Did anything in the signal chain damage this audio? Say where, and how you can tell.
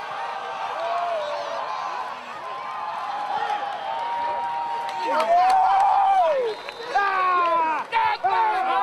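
No, nothing in the chain damaged this audio.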